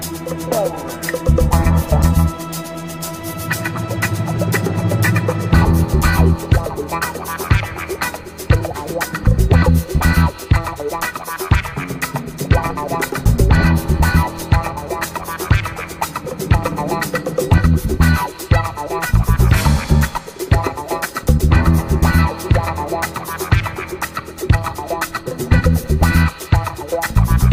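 No technical faults can be heard anywhere in this audio.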